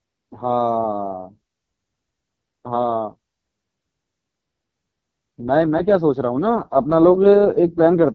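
AMR wideband (HD Voice) codec damage runs through the whole speech clip. The encoder models the voice as pulses through a vocal tract filter up to 6.4 kHz and pads the top band with shaped noise. The heavy rough, raspy texture fits its lowest 6.6 kbit/s mode.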